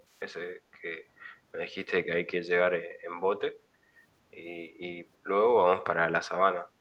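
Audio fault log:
0.14–0.21 s, echo leak: a very faint copy of the speech returns 352 ms late, roughly 40 dB down, likely loudspeaker pickup that the far end's echo canceller missed. A spectrogram shows a dim, time-shifted repeat of the harmonic bands, nearly invisible in the waveform.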